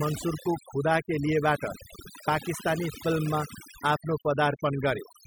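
Overdone noise removal runs throughout the speech, leaving near-silent gaps with twinkling specks; a spectrogram shows scattered, blotchy holes and isolated bright dots.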